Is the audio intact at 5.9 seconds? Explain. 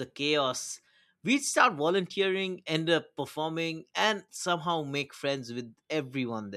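Yes, at 5.9 seconds the speech is intact, with no dropout, click, distortion or other fault at that moment.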